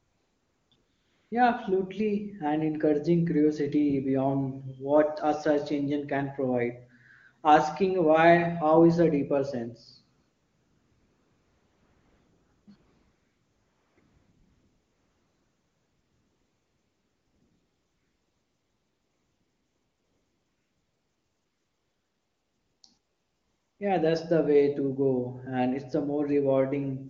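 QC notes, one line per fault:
0.00–0.71, 0.75–1.31, 10.19–12.67, 12.75–13.97, 13.99–22.83, 22.97–23.79 s, AMR comfort noise: the phone stopped sending speech frames during pauses, so the receiver substituted smooth synthetic noise that switches in and out against the real background.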